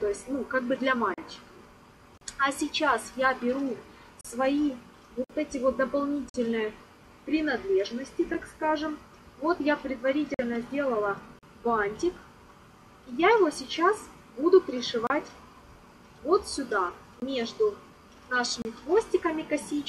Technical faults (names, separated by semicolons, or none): gap between stream segments; block of digital silence